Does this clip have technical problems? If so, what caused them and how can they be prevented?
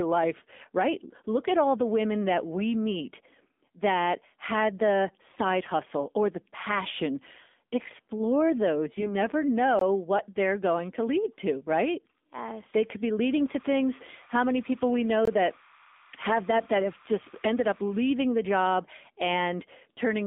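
Yes. Throughout the clip the speech sounds buzzy, boxy and synthetic, with no low bass and nothing above about 3.6 kHz. The passband runs from roughly 250 Hz to 3.6 kHz. This is the AMR narrowband mobile codec. It samples at 8 kHz and rebuilds the voice from a vocal-tract model excited by a few pulses per subframe. At a low rate, which fits the 7.4 kbps mode, that model leaves a plainly audible coarse, processed quality. Prevention: carry the call over a wideband codec such as AMR-WB or EVS, or at a higher AMR mode.

From 8.94 to 9.16 s the voice keeps roughly its pitch and loudness but turns hoarse, scratchy and gargly for about a fifth of a second. These are AMR bit errors. A weak radio link flipped a few percent of the lightly protected bits in five frames, while the checksum on the critical bits still passed. The decoder therefore placed excitation pulses wrongly and used slightly wrong gain and spectral values. 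Prevention: improve link quality or use stronger channel coding so that corrupted frames are caught and concealed.

From 9.79 to 9.81 s, just before "what they're going to", and again from 15.25 to 15.28 s, the sound drops abruptly into a short dead hole of about 21 ms. Each one is a block of digital silence. Output samples were replaced with zeros, with no fade in or out, and the length fits a missed 1024-sample buffer. Prevention: give the audio thread enough priority and buffer headroom that it never fails to fill the output in time.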